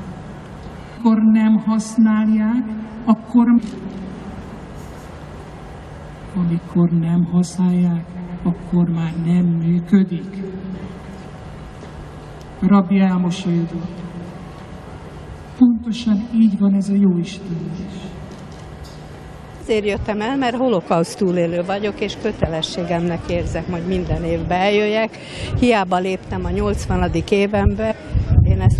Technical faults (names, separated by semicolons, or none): damaged data in a compressed stream